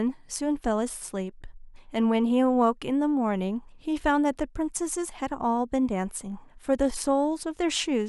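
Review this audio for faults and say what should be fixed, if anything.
No faults found; nothing needs fixing.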